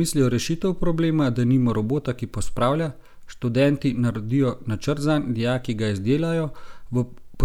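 No technical faults can be heard anywhere in this speech recording.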